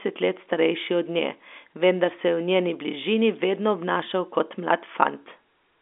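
Nothing stood out on listening to this speech, which comes through as ordinary telephone audio carried over G.711 telephone coding.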